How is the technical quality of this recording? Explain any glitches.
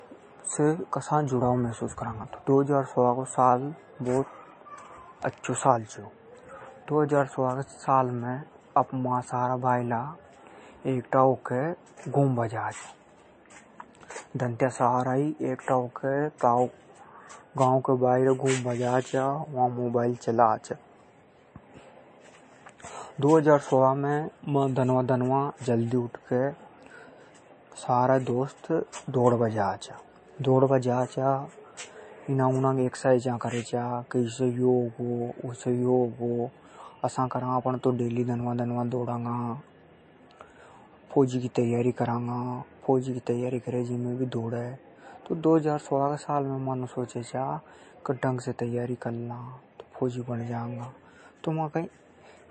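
The recording is degraded by MP3 compression throughout. Starved of bits, which fits a bitrate near 33 kbps, the encoder likely cut everything above 8.3 kHz and dropped weak frequency lines frame by frame, so the speech sounds dull, watery and swirly, with plainly audible chirpy artefacts on s sounds.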